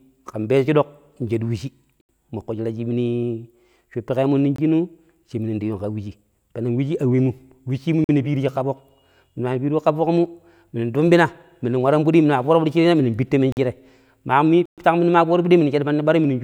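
Blocks of digital silence cut the speech at 2.01, 4.56, 8.04, 13.52 and 14.66 s. Each lasts 23 to 122 ms. The output buffer likely went unfilled. The 46 ms gaps fit a 2048-sample buffer.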